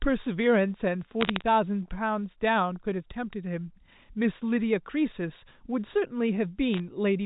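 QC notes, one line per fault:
1.21–1.42 s and 6.74–6.80 s: bit errors on a digital phone line. Brief crackly bursts of sharp ticks ride over the band-limited telephone speech. Roughly three bits in a thousand flip. Each spoils one sample, and high-bit hits or sign hits on loud samples jump far and click.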